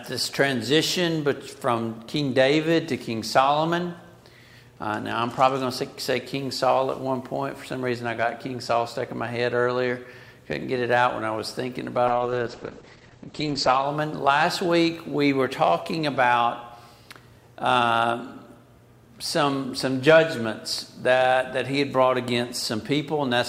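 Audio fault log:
12.08–13.91 s call bitrate drop: the encoder lost most of its bits, consistent with around 9 kbps; audio turns coarse and muffled, losing everything above 8 kHz.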